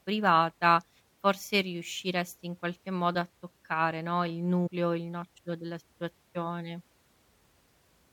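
A speech recording with compressed frames skipped at 3.14 s and from 4.66 to 4.68 s. The audio jumps forward by roughly 30 ms and then roughly a tenth of a second, consistent with a few whole frames lost or rejected by the decoder.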